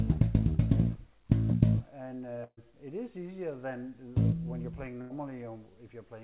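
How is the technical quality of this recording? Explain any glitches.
Two short glitches break the recording, both a burst of packet loss, heard through a narrowband call path with nothing above 4 kHz, which fits G.711 A-law at 64 kbps.

At 2.44 to 2.59 s and again at 5.01 to 5.12 s, a run of packets never arrived in time. The receiver stretched the last sound for about 130 ms and 90 ms, fading it toward silence before the audio resumes further on, about 140 ms and 100 ms later. Unlike a plain dropout, there is no abrupt mute. You hear a held, decaying tail, and the sound picks up past the point where it broke off instead of where it stopped.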